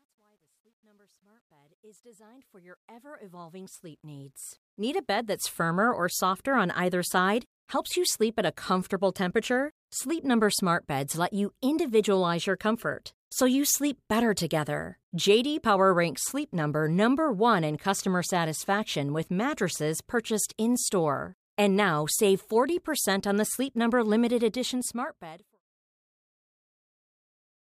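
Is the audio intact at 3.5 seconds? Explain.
No. At 3.5 s the speech is inside a stretch of truncation distortion on a fade running from 0.0 to 5.58 s, just before "or softer on either". The fade-in was computed at only 11 bits with no dither, so the quiet samples snap to coarse steps. It is harshest from 0.0 to 2.87 s, and still gritty at 3.5 s. The waveform shows staircase steps, and the spectrogram shows broadband fuzz riding on the rising level.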